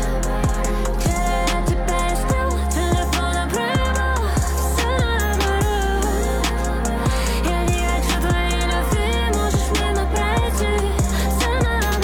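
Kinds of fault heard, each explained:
No technical faults heard.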